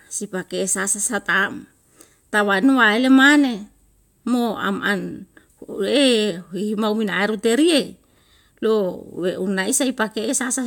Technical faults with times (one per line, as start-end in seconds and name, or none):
none